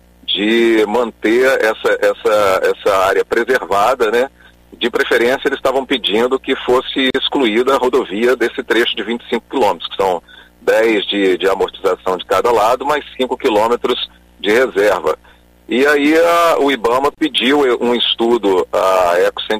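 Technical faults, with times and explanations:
7.10 s and 17.15 s, gap at a join of encoded pieces: the sound drops out for 42 ms and then 31 ms, with smeared edges, and picks up where it left off. The audio was joined from separately encoded 10 s pieces without trimming, leaving each encoder's start delay and end padding as silence.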